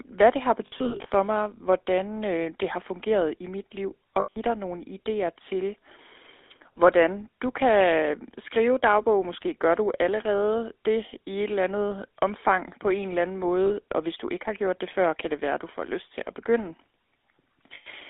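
Speech heard through the GSM full-rate codec throughout: a plainly audible buzzy, gravelly roughness over a narrow 300 to 3600 Hz line band, which fits 13 kbps GSM full rate. Unlike generic low-bitrate blur, its excitation is a coarse pulse train, so the grit sits inside the voice itself. Lost GSM frames occur at 0.66 to 1.11 s (220 ms scattered over 440 ms), 4.20 to 4.37 s, 13.66 to 13.76 s and 17.74 to 17.88 s, with runs no longer than about an eighth of a second. Each loss holds the last sound as a metallic ring, rather than dropping to silence or clicking as plain dropouts do.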